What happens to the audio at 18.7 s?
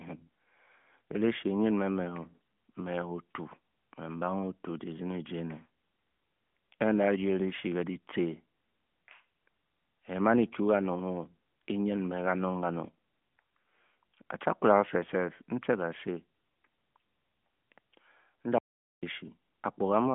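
At 18.7 s the speech falls into an audio dropout to silence lasting from 18.58 to 19.03 s, about 0.44 s. The input was likely lost while zeros kept being written, so the sound stops dead with no room tone. The waveform goes flat and the spectrogram shows a blank vertical band.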